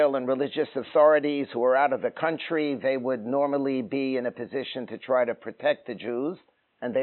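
No dropouts, clicks, distortion or level jumps turn up anywhere in the audio.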